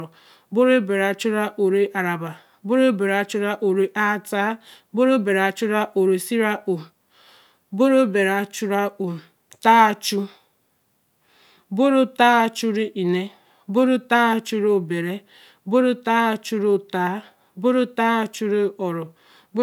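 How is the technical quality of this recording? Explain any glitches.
No glitches turn up here at all, so there's nothing in this recording that needs explaining.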